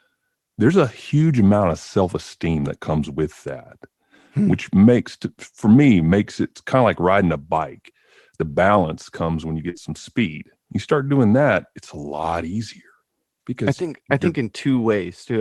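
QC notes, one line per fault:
9.69–9.75 s: short concealed packet loss. About 40 ms arrived too late, so the decoder extended the preceding sound and blended back, causing a brief smear.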